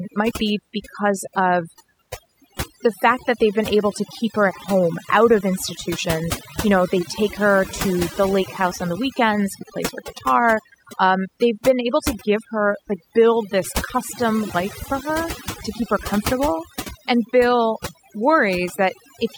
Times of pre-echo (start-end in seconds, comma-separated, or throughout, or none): none